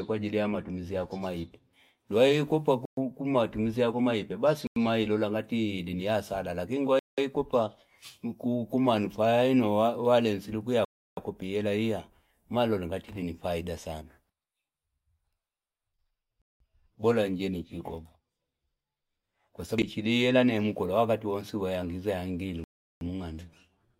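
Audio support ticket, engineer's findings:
Block of digital silence, speech, six hard cuts to silence: 2.85 s (before "tumizi ya kuma ipe"), 4.67, 6.99, 10.85, 16.42, 22.64 s, lasting 93 to 372 ms. No fade and no concealment fill. Four of the gap lengths fit 4096/8192/16384-sample output buffers, pointing to buffer underrun, not packet loss.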